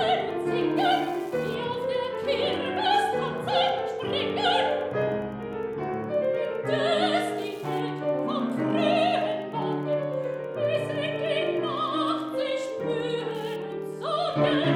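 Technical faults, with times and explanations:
Throughout: Wi-Fi interference. A steady ticking sits under the audio at roughly ten ticks per second, with a spacing of 102.4 ms, which fits a Wi-Fi beacon interval. A nearby radio's bursts are being rectified by the audio circuitry and turned into audible pulses. The ticks are low, around 40 dB below the wanted signal, so they show most clearly in quieter passages as a faint, regular patter with rougher bursts between beacons.
1.08 s, 2.53 s, 3.69 s: dropped samples. Each is a single sharp click, heard as a thin vertical line across the spectrum. The likely cause is a handful of samples, a fraction of a millisecond, missing from the stream. The waveform then jumps abruptly from one value to a later one. The gap is far too short to remove any audible sound, so only the discontinuity registers. That broadband step is what makes the click.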